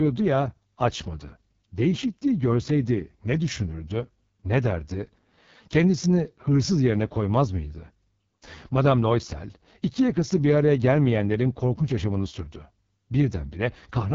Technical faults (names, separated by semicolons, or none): AMR wideband (HD Voice) codec